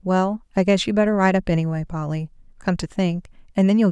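Nothing in the recording stood out as a technical fault on listening.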